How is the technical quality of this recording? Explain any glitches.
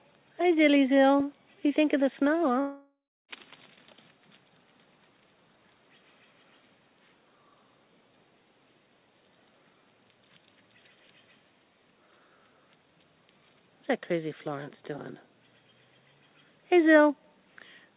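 The recording has one clear glitch, a long network dropout, heard over narrowband call audio that stops at 4 kHz, which fits a telephone codec such as G.711 mu-law.

From 2.6 to 3.31 s, incoming audio likely stopped arriving for about 0.7 s. The receiver stretched the last sound into a fading buzz, then roughly 0.3 s of silence. Sound resumes at 3.31 s with that stretch missing.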